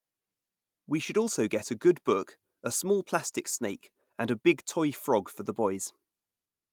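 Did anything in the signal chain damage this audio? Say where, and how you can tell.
No, nothing along the chain can be heard damaging this speech recording at any stage.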